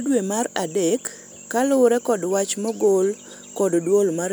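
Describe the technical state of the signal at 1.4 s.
At 1.4 s the speech signal is intact, with no audible fault at that point.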